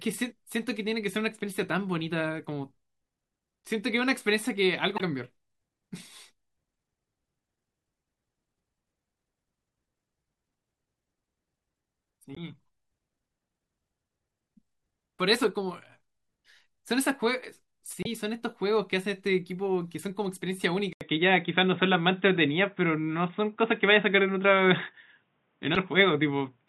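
Damaged data in the compressed stream at 4.96–5.01 s, 12.34–12.38 s and 18.03–18.07 s knocks the decoder out of sync for a brief moment each time. From 20.93 s the input likely switched to a poorer device. After an 80 ms silence the speech turns dull and boxy with nothing above 3.8 kHz, shifts in level by roughly 5 dB, and picks up faint new background noise. Another burst of damaged data at 25.73–25.77 s adds one more blip.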